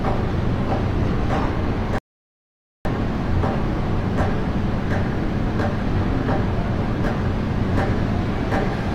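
A recording of sounds with one rebuffering stall: the player ran dry of downloaded audio at 1.98 s, falling silent until 2.85 s, then resumed exactly where it stopped, adding about 0.87 s.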